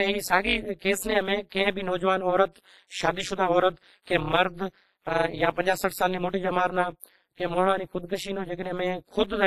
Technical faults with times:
0.00-9.46 WMA compression
0.00-9.46 overlap-add ripple
0.79-0.82 pre-echo
1.49-1.52 pre-echo
4.04-4.07 pre-echo
7.00-7.03 pre-echo

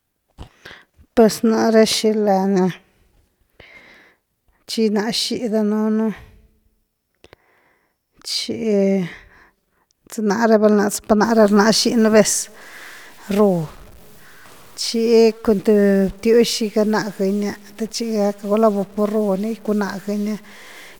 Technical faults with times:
11.24-20.99 stuck bit

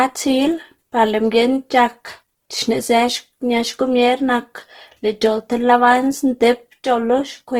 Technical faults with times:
0.00-7.60 Opus compression

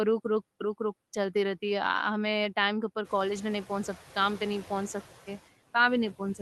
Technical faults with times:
0.00-6.41 noise suppressor artifacts

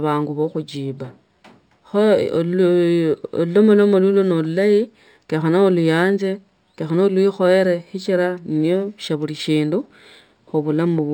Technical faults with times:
0.00-11.13 imaging from linear upsampling

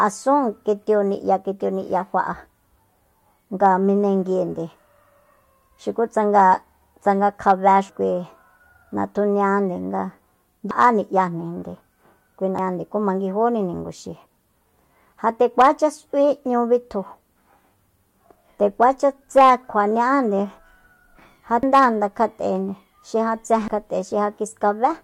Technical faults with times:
7.89 damaged data in a compressed stream
10.71 damaged data in a compressed stream
12.59 damaged data in a compressed stream
21.63 damaged data in a compressed stream
23.68 damaged data in a compressed stream

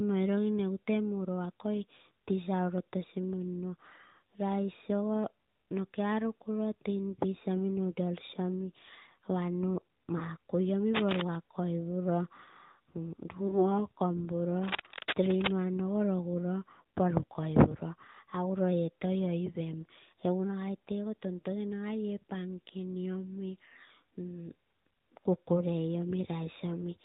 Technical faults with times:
0.00-27.04 AMR narrowband mobile codec
10.18-10.22 lost AMR speech frames
10.94-11.22 cable scratch noise
13.48-13.78 lost AMR speech frames
14.63-15.52 cable scratch noise

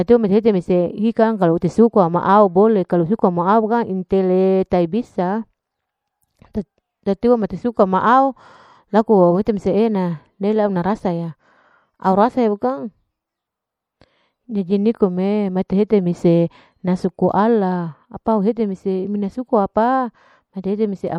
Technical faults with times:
0.00-21.18 MP3 compression

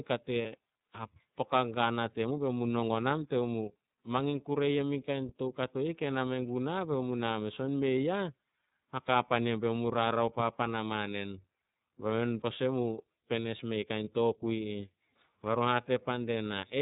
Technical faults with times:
0.00-16.82 iLBC codec
0.41-0.45 lost iLBC frames
14.04-14.08 lost iLBC frames

